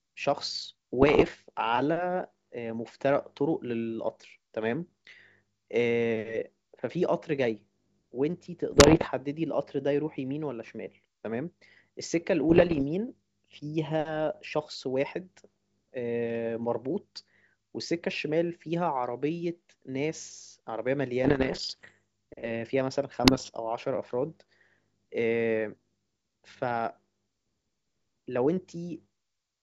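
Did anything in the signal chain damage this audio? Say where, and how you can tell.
Yes, bit errors on an ADPCM link: rough popping bursts at 1.02–1.29, 8.72–9.08, 12.49–12.83, 21.24–21.93 and 23.24–23.50 s. Each flipped bit, around one or two percent of them, throws off the decoder's step size and predictor, so the damage rings on briefly.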